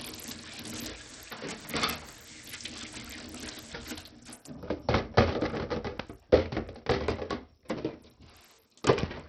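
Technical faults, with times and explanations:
Throughout, Bluetooth SBC compression: nothing above 14.6 kHz, gritty flickering treble, likely from top sub-bands starved of bits, which fits a bitrate around 64 kbps.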